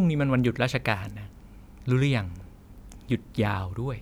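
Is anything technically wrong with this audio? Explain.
No, nothing technical stands out here; the speech comes across without any faults worth flagging.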